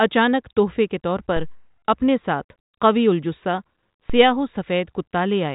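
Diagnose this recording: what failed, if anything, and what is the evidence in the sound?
DC step at the converter input: low thumps at 1.37 s, after "تحفے کے طور", and 4.10 s, after "اپنے ساتھ قوی الجثہ". Each offset decays through a roughly 2 Hz high-pass. Unlike a dropout click, the speech continues uninterrupted.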